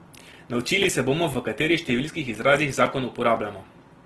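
From start to finish the speech has a rough, grainy texture, with tones turned noisy and nothing above 12.2 kHz. That is the signature of Opus compression, likely in its CELT music mode at a low rate that points to roughly 16 kbps. When bits run short, the encoder fills starved bands with folded or noise-like energy instead of leaving holes, so the damage sounds gritty rather than swirly.

Cutting through this, the sound drops out for about 6.5 ms, a short hard-edged hole, at 0.33, 0.83 (just before "se bomo v katerih"), 1.34, 1.85 (after "se bomo v katerih" and before "številskih izrazih"), 2.35 (after "bomo v katerih številskih"), 2.86 and 3.37 s. These are gaps between chunks. The audio was delivered in 0.5 s pieces, and a little silence was inserted at each join. Nothing is lost, but the flow stutters on a steady beat.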